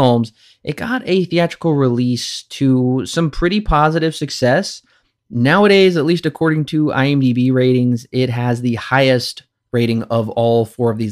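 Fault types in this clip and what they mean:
Bit error spike: a single flipped bit in a stored or transmitted sample, jumping the value by a power of two for a moment. Here it's one sharp, broadband tick at about 7.46 s, just before "ratings it has the", peaking around -29 dBFS across three samples.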